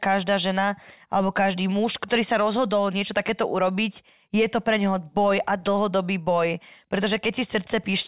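Speech recording; no audible technical faults anywhere in it.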